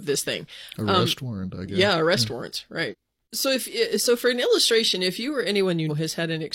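At 2.88 s and again at 5.86 s the speech lurches forward with compressed frames skipped, roughly 0.4 s then 0.3 s lost in 46.4 ms steps.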